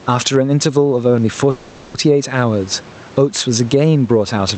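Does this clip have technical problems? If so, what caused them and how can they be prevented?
Yes. Gain pumping runs through the whole clip. The gain swings by around 10 dB. Loud and soft parts sit too close together. The likely cause is input gain set far too high, with a fast limiter pulling it back down. Lowering the microphone gain so the limiter rarely engages prevents it.

There is a call audio freeze from 1.50 to 1.95 s. The last sound is stretched into a fading buzz or hiss for about 440 ms. Then the speech carries on from where it stopped, so nothing is lost, only delayed. This likely comes from delayed packets emptying the jitter buffer. A steadier network connection, or a larger jitter buffer, prevents it.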